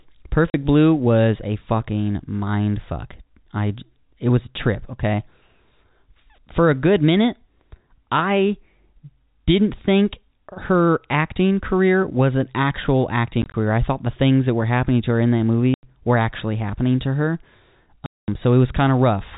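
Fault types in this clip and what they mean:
packet loss filled with silence: parts of the stream never arrived and the receiver played silence instead. Hard-edged dropouts come in 10 ms steps, which fits 10 ms packets, some scattered between "career was an actual" and "I thought the things", longest at 18.06 s (220 ms).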